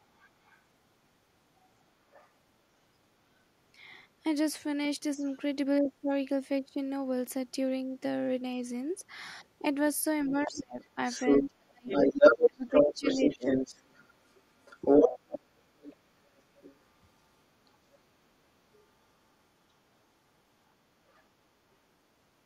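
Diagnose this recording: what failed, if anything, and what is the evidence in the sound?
Other side's voice leaking through, in call processing. Residual far-end speech sits under the talker at 0.18–0.58 s, 1.62–2.29 s, 5.33–5.37 s, 18.73–18.86 s and 21.09–21.23 s, roughly 30 to 35 dB down. From 10.46 to 17.7 s it is about as loud as the talker or slightly louder. The likely cause is the echo canceller failing to remove loudspeaker sound picked up by the microphone, leaving the far end audible in the send path.

Speech suppressed in double talk, also in call processing. At 5.17–5.25 s the talker's level dips briefly by roughly 10 dB. From 10.25 to 13.72 s, overlapping the strongest leak, the talker is cut much harder, by roughly 35 dB, in pieces adding up to about two seconds. The likely mechanism is that the echo suppressor, unable to separate near-end speech from echo while both sides talked, attenuated everything.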